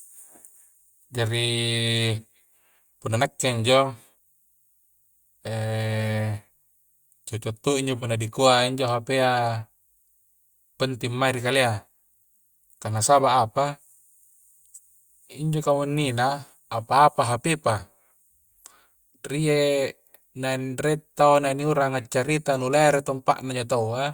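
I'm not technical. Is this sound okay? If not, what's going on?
Yes, nothing stood out as a problem when listening to this recording.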